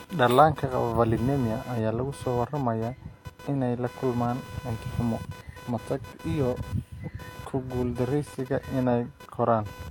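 From start to finish, computer activity noise sits under the speech. A buzzy, chirping pulse repeats at around 500 Hz, roughly 20 dB below the speech. Processor or graphics load is shifting the shared ground of the audio circuit. The buzz follows the computer, not the speech.

Also throughout, nothing is heard above 18.5 kHz. Two sets of lossy artefacts mix together. This points to transcoding between lossy codecs, likely a WMA encode at about 96 kbit/s re-encoded to HE-AAC at about 40 kbit/s.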